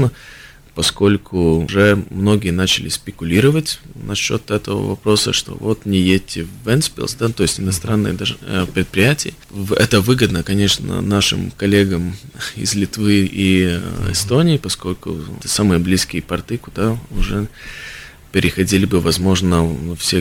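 No technical faults are audible.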